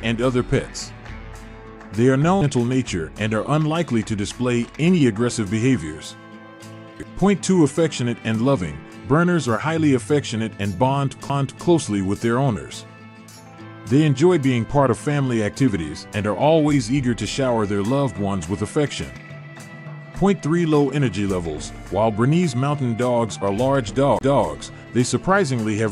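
CD skips occur at 2.41 s, 11.29 s and from 24.19 to 24.21 s. Each time the laser jumps tracks, so the audio mutes for a few milliseconds (about 20 ms in the last) with a tick, then resumes elsewhere. On a waveform this shows as a brief flat gap and a discontinuity, and on a spectrogram as a thin vertical broadband line.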